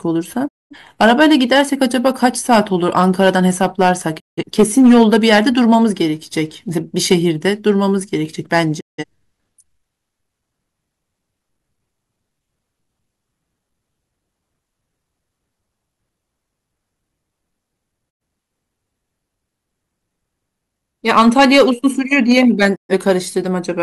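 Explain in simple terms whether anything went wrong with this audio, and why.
Yes, two things went wrong in this speech recording.

Digital broadcast dropout: the sound fades out in about 20 ms and goes silent at 0.47–0.76, 4.18–4.43, 8.79–9.04, 18.09–18.22 and 22.74–22.93 s. The receiver lost the signal, so those stretches, from under a tenth to about a fifth of a second, are simply missing. A pause by the speaker would leave the speech intact, but here part of it is gone when the sound returns.

Hard clipping: at 1.01–2.59, 2.97–3.92, 4.59–5.75, 7.12–7.71, 8.53–8.60, 21.09–21.69 and 22.13–23.11 s, the sound was too loud for the equipment. Its peaks were chopped flat, which adds a harsh, crackly fuzz. Background noise would be there all the time, but this fuzz rides only on the loudest moments.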